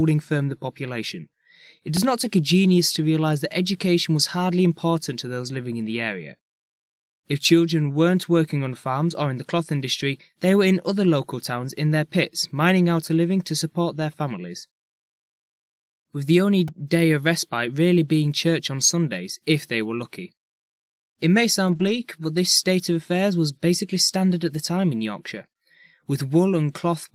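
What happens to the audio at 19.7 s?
At 19.7 s the speech carries on intact, with no dropout, click, distortion or other fault at that moment.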